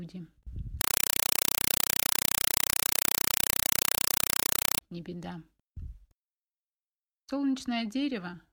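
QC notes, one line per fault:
0.81 to 4.81 s, compressed stream played as audio: for those four seconds the sound is replaced by very loud, chattering static. It pulses at about 31 times a second, each burst around 4 ms of harsh noise and then near silence. That's the pattern of AC-3 frames, consistent with a 192 kbps stream, arriving over the digital link and being treated as plain samples instead of going through a decoder, so the raw data is played straight out.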